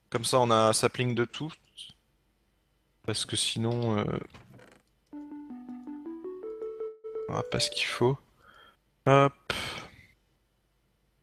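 At 6.87 s there's a call audio freeze lasting until about 7.06 s: the last bit of sound gets stretched into a fading buzzy fill for roughly 164 ms, then picks up where it stopped, nothing lost, just running that much later. Likely packets stalled and the jitter buffer ran dry.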